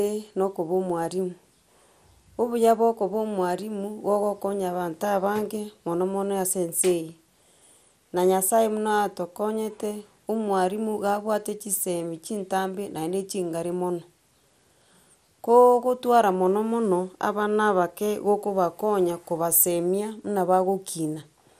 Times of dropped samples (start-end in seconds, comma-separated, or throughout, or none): none